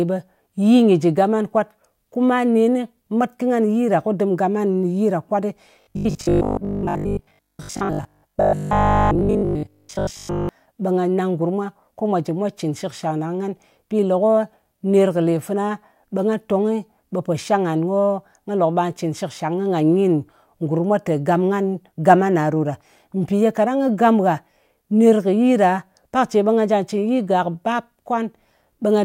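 From 5.81 to 10.49 s the speech turns into a rigid, metallic 50 Hz buzz. This is robotic sound from repeated short buffers, likely from 20 ms chunks replayed most of the time.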